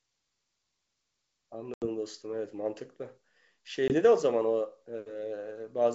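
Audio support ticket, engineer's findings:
Packet loss on an ADPCM call, G.722 wideband link at 64 kbit/s: hard-edged silent gaps at 1.74–1.87 s (80 ms lost, several packets) and 3.88–3.99 s (20 ms, one packet). Unlike a plain PCM dropout, the speech resumes slightly distorted while the decoder's predictor and step size resynchronise.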